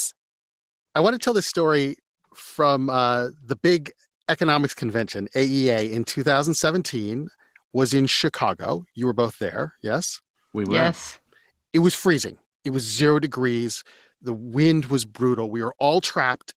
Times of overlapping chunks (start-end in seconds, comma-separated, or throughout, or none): none